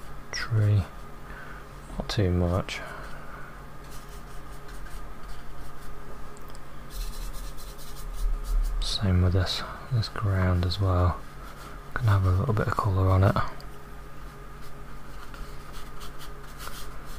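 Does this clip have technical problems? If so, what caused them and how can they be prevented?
No, nothing in the clip points to a technical fault, so there is no cause to trace and nothing to prevent.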